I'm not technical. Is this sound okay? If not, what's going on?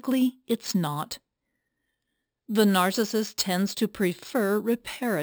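No. Throughout the speech there is imaging from sample-and-hold upsampling: the audio was stepped up from 12 kHz by repeating each sample without smoothing, so mirrored copies appear between 6 and 12 kHz, heard as a bright metallic fizz that tracks the voice.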